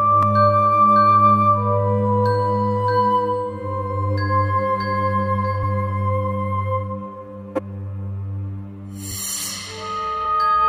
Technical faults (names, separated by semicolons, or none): compressed frames skipped; corrupt frame decoded